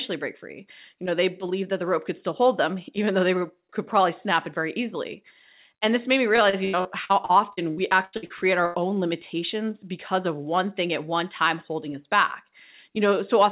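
From 6.36 to 8.77 s, packets kept arriving late or not at all. This repeated packet loss leaves about a dozen holes, the longest 84 ms, each patched by extending the preceding sound. Roughly a quarter of that stretch is filled in, so the narrowband speech turns choppy and robotic.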